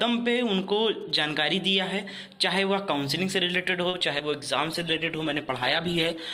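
GSM signalling bursts from 0.63 to 1.59 s: a galloping dit-dit-dit of short buzzes at about 217 Hz, roughly 30 dB below the main sound, from a nearby 2G phone whose radio bursts the audio circuitry rectifies. A short stall from a late packet at 3.89 to 3.95 s stretches the sound by about 40 ms while the jitter buffer waits, then resumes with nothing lost. Short concealed packet loss at 3.99 to 4.02 s and 4.18 to 4.21 s: about 20 ms of audio goes missing each time and is papered over with extrapolated sound, giving brief smears or wobbles. A call bitrate drop from 4.65 s to the end turns the audio coarse, watery and dull for its last 1.6 s, consistent with the encoder falling from around 128 to 16 kbps and shedding high frequencies.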